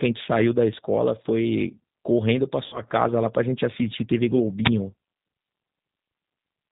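G.729 coding runs through the whole of this short speech recording at 8 kbit/s, and its damage is plainly audible. The codec rebuilds each 10 ms frame from a vocal tract filter, a pitch predictor and a handful of pulses instead of the waveform itself, so the voice sounds rough and slightly synthetic. Everything above 4 kHz is gone, which leaves the sound narrowband and muffled. VoIP packet loss concealed by the speech codec follows from 2.66 to 2.83 s. About 60 ms of audio failed to arrive, which fits two lost 30 ms packets. The decoder filled the gap by repeating its last pitch and filter settings with falling gain, so the voice smears into a buzzy tone or coloured noise that fades. Because each frame depends on the one before it, the sound stays weak and distorted for a while after real packets resume, which is why the disturbance lasts longer than the gap itself. An uninitialised buffer appears at 4.65 s and lasts about 23 ms. 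It is heard as a short, loud burst of harsh digital noise that cuts across the signal. A playback block was sent out before any audio had been written into it, so leftover memory contents were played as samples. The duration fits a 1024-sample block at 44.1 kHz.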